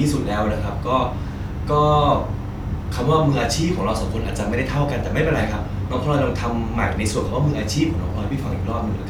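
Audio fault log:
Nothing to log here; no faults turn up anywhere in this bit of speech.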